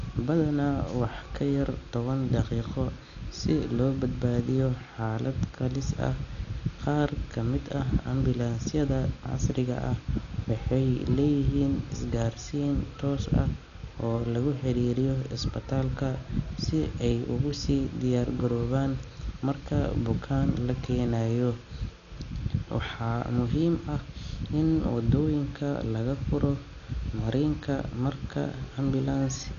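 From start to finish, the speech is dull and has nothing above 7 kHz. A rough, fluttering noise clings to voiced sounds. The likely cause is heavy Dolby Digital compression at a low bitrate, around 48 kbps. The encoder narrowed the band, and many frequency lines got no mantissa bits, so dither noise fills them.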